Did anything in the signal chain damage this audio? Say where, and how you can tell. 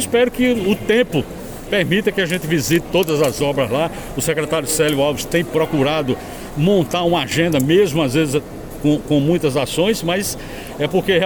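No, no stage of the signal chain has left audible damage on this audio. Listening closely, I find nothing to tie to capture, conversion, processing, transmission, storage or playback.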